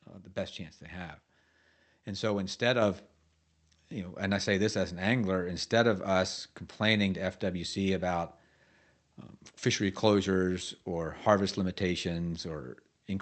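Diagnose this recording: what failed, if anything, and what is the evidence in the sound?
Microphone volume stepped up at 2.82 s, just after "so instead": speech and background noise rise together by about 5 dB in one instant step. The call software's gain control raised the device input level. A speaker moving closer would lift only the voice, and gradually.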